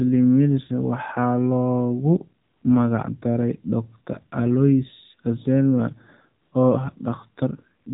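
Throughout the clip the speech sounds thin and boxed-in, with nothing above 4 kHz and a buzzy, synthetic edge on every syllable. This is the AMR narrowband mobile codec at work: the audio is reduced to 8 kHz sampling and rebuilt from a vocal-tract model excited by a few pulses per 5 ms subframe. The plainly audible damage fits a low mode of about 7.4 kbps.

From 2.46 to 2.62 s, right after "waxaa loogu", the background gives way to a smooth, even hiss for about 160 ms before the real sound returns. A shorter patch of the same steady noise runs from 6.42 to 6.52 s, just before "oo ah", and a last brief one from 7.84 to 7.86 s. Each is AMR comfort noise. The sender judged these moments silent and stopped sending speech frames, so the receiver filled the gaps with synthetic noise built from a rough description of the background's level and spectrum.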